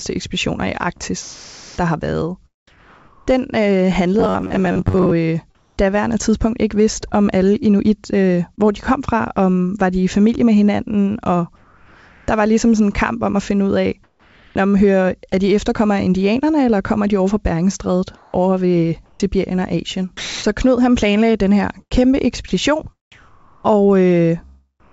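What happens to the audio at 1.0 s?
Between 0.98 and 1.02 s there is a brief smear, a tiny wobble where about 20 ms of the signal never arrived. This is short concealed packet loss: the receiver extended the preceding sound to fill the gap, then blended back into the real audio.

From 0.98 s to 5.91 s, about 1.4 s of the natural background is replaced by a steady, featureless hiss during the pauses. This is comfort noise in place of the background, likely from discontinuous transmission, with the receiver synthesising noise shaped like the room.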